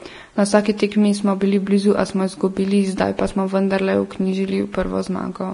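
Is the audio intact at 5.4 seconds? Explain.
No. Vorbis compression, likely at a low bitrate around 32 kbps, runs throughout the clip, coarsely quantising the treble and removing everything above 10.6 kHz, so the speech sounds hissy and grainy.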